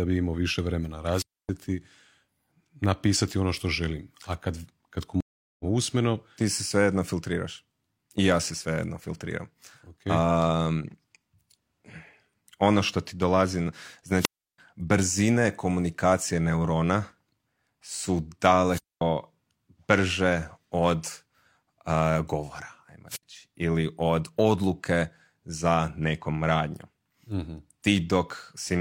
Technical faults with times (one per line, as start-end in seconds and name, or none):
1.12-1.49 wireless microphone squelch dropout
5.20-5.65 stream reconnect
14.17-14.58 wireless microphone squelch dropout
18.68-19.01 wireless microphone squelch dropout
23.09-23.23 wireless microphone squelch dropout